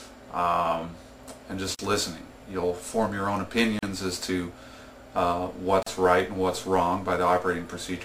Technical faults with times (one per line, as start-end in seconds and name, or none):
1.75-1.79 gap at a join of encoded pieces
3.79-3.83 gap at a join of encoded pieces
5.83-5.86 gap at a join of encoded pieces